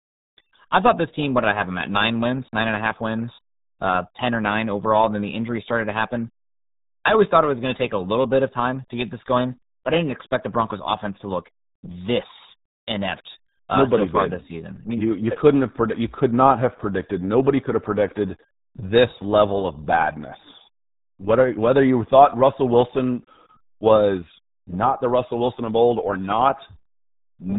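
From start to finish the speech carries the signature of the RealAudio 14.4 codec, the early RealAudio 1 format built for dial-up modems. The band stops hard at about 3.8 kHz, removing sibilance and air, and the heavy coding damage leaves the speech muffled with a gargling, bubbly texture. That degree of smearing points to a very low rate, consistent with an 8 kbit/s stream.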